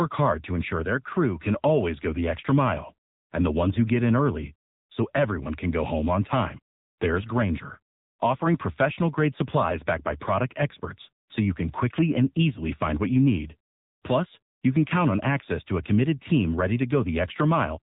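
Speech throughout carries AMR narrowband mobile codec damage: nothing above 3.8 kHz, plainly buzzy synthetic voicing that fits roughly 7.95 kbps AMR-NB. Unlike a plain low-pass, the voice itself sounds modelled, not just dulled.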